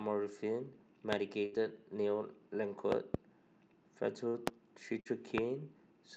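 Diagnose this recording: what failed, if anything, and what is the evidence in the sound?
Loud pops at 1.13–1.15, 4.47–4.50 and 5.38–5.40 s, plus a double pop at 2.92–3.17 s, spike about 20–25 dB over the speech, likely analogue wiring transients.

Bursts of packet loss on the network path at 1.45–1.57, 4.28–4.37 and 5.00–5.08 s: concealment holds and fades the last sound, then speech resumes with about 60 ms missing.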